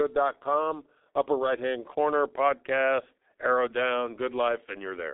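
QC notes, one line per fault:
throughout, G.723.1 codec: muffled, hoarse speech, blurred consonants, nothing above 3.8 kHz; heavy damage from coarse 30 ms frames, which fits a 6.3 kbit/s coder.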